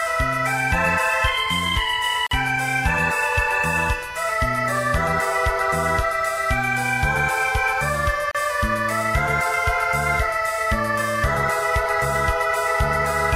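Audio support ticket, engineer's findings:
Gap at a join of encoded pieces, 2.27–2.31 s (47 ms) and 8.31–8.35 s (34 ms), 6 s apart. Separately encoded segments joined untrimmed; encoder delay and end padding leave silence before sound resumes.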